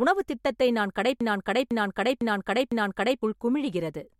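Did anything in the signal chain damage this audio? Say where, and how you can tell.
Yes. After "உணவுத் திட்டத்தை நான்", a 0.5 s fragment repeats four times, 1.21 to 3.22 s: a broken-record loop. A stalled playback buffer likely replayed it.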